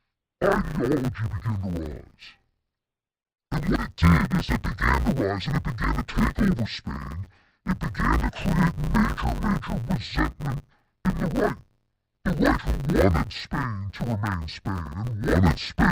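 Speech affected throughout by interleaved audio read as planar, in 10 ms blocks: each block's alternating samples are split into halves played together at half speed, so the sound turns dull and robotic with a 100 Hz buzz. Unlike a sample-rate mismatch, pace holds and there's no clear octave drop.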